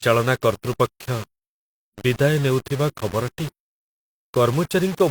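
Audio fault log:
throughout: low bit depth without dither. Quiet passages turn gritty, with grainy distortion that follows the speech and drops to silence in pauses, likely from rounding to about 5 bits. The waveform shows visible staircase steps. The spectrogram shows broadband hash tracking each syllable, roughly 20 dB below the signal.
2.97–3.00 s: overlap between stream segments. About 34 ms of speech is cut away where two segments' time stamps overlap, so the sound skips. The waveform jumps abruptly at the splice, and the spectrogram shows a thin vertical broadband line there.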